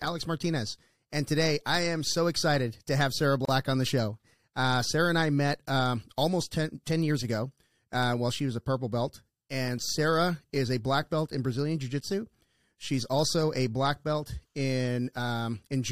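In this speech recording, the sound drops out abruptly for about 33 ms between 3.45 and 3.49 s, then resumes where it stopped: a gap at a join of encoded pieces, where separately encoded segments kept their start delay and end padding.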